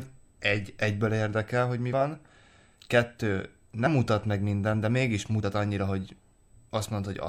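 A steady USB whine at 8 kHz runs underneath the speech the whole way through, about 45 dB down, most likely current pulses from the USB microframes leaking into ground.

Then come three compressed frames skipped: at 1.92 s after "egyből érdekel hogy mi", at 3.85 s just before "mutat meg minden de", and at 5.42 s after "meg minden de mégis". Each is a brief smeared blip, jumping ahead by about 50, 50 and 30 ms, which fits dropped frames of roughly 26 ms.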